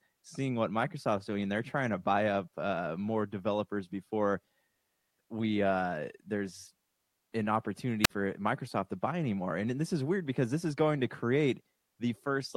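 Right after "we uh there's an", at 8.03 to 8.10 s, there's a wireless microphone squelch dropout: the radio signal fades, hiss creeps up, then the receiver mutes for about 50 ms.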